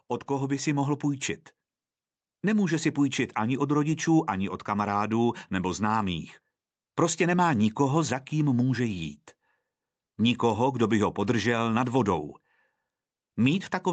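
From 0.27 to 1.31 s, the automatic gain control judged the incoming speech too quiet and ramped its gain up by about 3 dB. This automatic gain rise makes voice and background noise swell together over roughly a second in the band-limited call audio.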